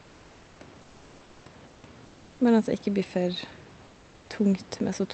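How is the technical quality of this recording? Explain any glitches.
The recording's technical quality is affected by one recurring glitch: in the pauses, the room background is replaced by comfort noise.

Comfort noise in place of the background appears at 0.00–0.59 s, 0.81–1.45 s, 1.67–1.83 s, 2.05–2.39 s and 3.85–4.29 s. In each gap the natural room hiss, sitting about 30 dB below the speech peaks, turns into a flat, featureless noise about 1 to 4 dB quieter, then snaps back when speech resumes. This is likely discontinuous transmission in the Opus call codec: the sender goes quiet during pauses, and the receiver fills them with synthetic noise. The upper limit of the audio fits a codec band-limited near 8 kHz.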